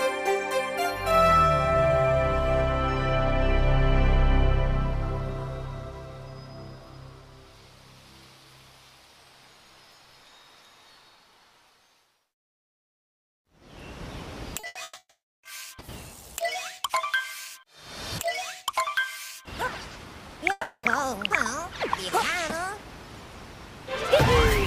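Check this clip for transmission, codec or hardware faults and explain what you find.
There are transmission faults: a cluster of losses between 14.59 and 15.46 s, and a second gap at 20.51 to 20.86 s.

Short concealed packet loss at 14.59 to 14.66 s: 40 ms of audio never reached the decoder in time. The receiver covered the hole by carrying the preceding sound forward, then cross-faded into the real signal again. It is heard as a brief smear or wobble, and 40 ms of the original sound is gone.

Burst of packet loss at 14.67 to 14.78 s and 14.83 to 14.98 s: consecutive packets went missing, 80 ms and then 120 ms. In each gap the receiver extended the last sound and attenuated it, so a held buzz or fading hiss replaces the original. The second burst ends in about 10 ms of silence before the audio resumes, skipping the lost stretch.

Long network dropout at 14.99 to 15.46 s and 20.51 to 20.86 s: these are likely network dropouts. 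The first lasts 440 ms. Concealment briefly stretches the previous sound, which decays, then about 350 ms of silence follows before the audio returns further on. The second lasts 320 ms, with a fading fill and about 70 ms of silence. In both, the content of the gap is missing.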